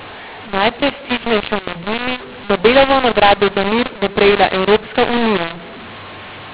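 A speech clip carried over G.711 telephone coding, band-limited below 4 kHz, with a mu-law and A-law mix-up running throughout: samples coded as mu-law are being decoded as A-law. Because the two logarithmic curves disagree, every level is remapped wrongly, giving harsh, gritty distortion on the speech while the pauses, which should be near silence, fill with hiss. Unlike clipping, the damage reaches quiet passages as well as peaks.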